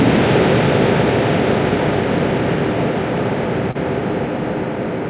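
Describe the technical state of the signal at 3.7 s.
At 3.71 to 3.78 s there is a short concealed packet loss: about 30 ms of audio never reached the decoder in time, and the receiver filled the hole with 36 ms of sound extrapolated from what came just before, then blended back into the real signal. It is heard as a brief smear or wobble. Above 4 kHz the spectrogram is empty throughout, which fits a G.711 mu-law call path.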